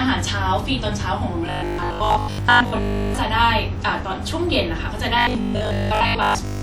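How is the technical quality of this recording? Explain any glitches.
The quality breaks down twice. From 1.47 to 3.19 s and again from 5.19 s to the end, the speech becomes a rigid, metallic 50 Hz buzz that loosely tracks the words. This is robotic sound from repeated short buffers, likely caused by audio arriving too seldom. The software keeps replaying a 20 ms slice, skipping most of the real audio and imposing that fixed pitch.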